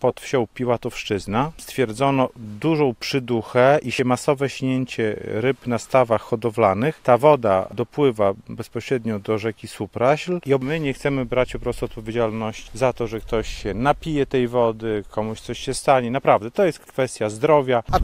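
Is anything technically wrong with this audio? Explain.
No, nothing technically wrong stood out on listening to this audio.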